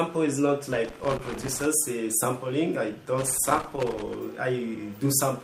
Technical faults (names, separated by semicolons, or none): loose connector crackle